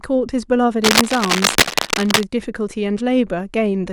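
A worn cable, connector or control was likely being moved between 0.84 and 2.23 s, so its contact resistance jumped about rapidly and fed irregular noise straight into the signal path. The result is cable scratch noise: dense, uneven bursts of scratching and rustling that sit on top of the speech for roughly a second and a half, at about the same loudness as the speech itself.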